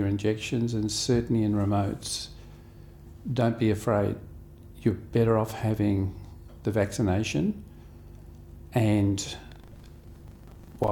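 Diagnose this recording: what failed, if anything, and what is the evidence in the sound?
Buffer tearing at the driver or buffer stage from 9.48 s to the end: a 25 Hz rattle heard only with signal. Each 40 ms period holds about a tenth of audio from roughly 150 ms earlier, hard-joined on both sides. This shows as waveform steps and evenly spaced vertical spectrogram lines.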